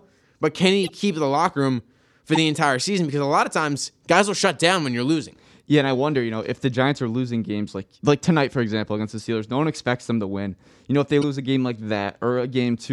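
Corrupt frame decoded at 0.83–0.89 s (after "but can"), 2.33–2.38 s (after "the locker room for"), 9.18 s (after "for example against the") and 11.22–11.24 s. Damaged compressed frames, one to a few each time, were decoded anyway, so misread gains and codes threw energy into the wrong frequencies. Each is a brief chirp or burst of noise in the speech, loudest at 2.33 s, around -10 dBFS, and faintest at 9.18 s.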